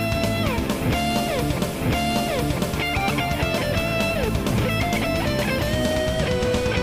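At 1.73 s there's a stream segment repeated: the player fetched or queued the same chunk twice, so a full second replays through 2.73 s, with a small blip at the jump back.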